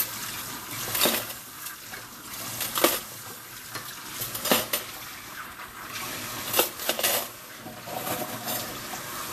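Vorbis compression runs through the whole of this sound recording. Nothing is present above 14.2 kHz, and the treble is hissy and grainy, with blurred attacks. The likely cause is low-quality Vorbis coding, consistent with a rate near 37 kbps, where coarse treble quantisation swaps fine detail for noise.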